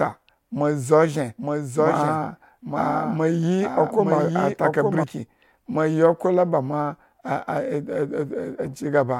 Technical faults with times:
1.38-5.04 doubled audio track

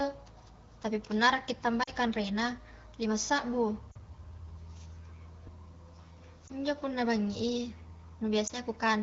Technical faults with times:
1.83-1.90 lost AMR speech frames
3.91-3.97 lost AMR speech frames
6.48-6.52 lost AMR speech frames
8.47-8.53 lost AMR speech frames

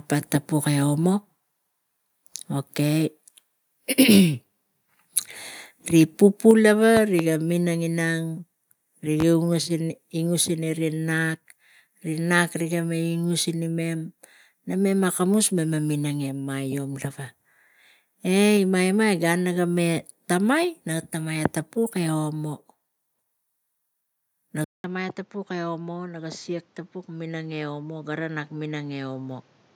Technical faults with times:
6.51 microphone volume stepped down
6.97-7.23 loud pop
9.20-9.24 loud pop
24.64-29.75 input switched to a poorer device

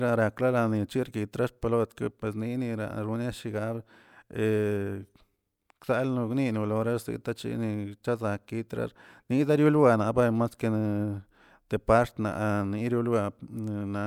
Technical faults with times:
none

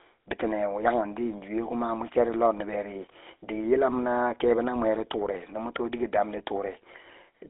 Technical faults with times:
0.00-7.50 GSM full-rate codec

